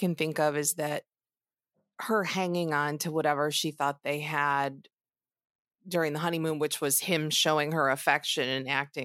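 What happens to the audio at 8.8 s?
Nothing goes wrong at 8.8 s: the speech carries on intact through that moment, with no dropout, click or distortion to be heard.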